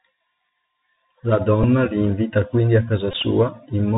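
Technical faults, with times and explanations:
throughout, Bluetooth CVSD headset codec: The speech sounds narrow and boxy, with nothing above 4 kHz, a grainy hiss under it, scratchy s sounds, and roughness where loud high sounds come through. This fits the 64 kbps Bluetooth headset codec, which sends one bit per sample saying only whether the signal rises or falls, with a step size that adapts. Fast, loud high sounds outrun that step and smear, and the constant up-down hunting leaves the granular noise.
1.63 s and 3.11 to 3.15 s, Bluetooth headset packet repeated: At 1.63 s, just before "li invita quindi a", there is a brief tick. After "li invita quindi a", 3.11 to 3.15 s brings a short buzzy stutter near 267 Hz. Voice packets between headset and phone were lost, and the chip replayed the last good packet's bits. The gaps of about 7.5 ms and 18.8 ms fit two and five lost packets. Repeating every 3.75 ms produces that buzz.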